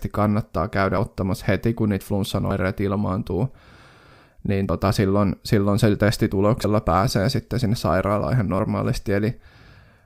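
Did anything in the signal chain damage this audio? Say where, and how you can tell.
Yes. The speech skips forward at 0.98, 2.51, 4.69, 6.64 and 8.59 s, each jump losing around 50 ms with no silence in between. This is likely a dropped buffer (overrun) at the driver stage: unread samples were overwritten, splicing the remaining audio together.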